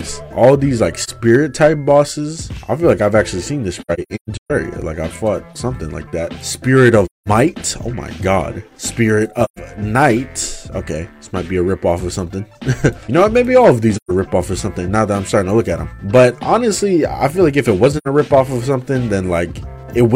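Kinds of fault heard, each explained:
AAC frame loss with muting: the sound falls into soft-edged silent holes, from a brief gap near 1.03 s to a choppy stretch of scattered dropouts at 3.81 to 4.51 s. The decoder zeroed missing frames, and the overlapping windows fade each gap out and in.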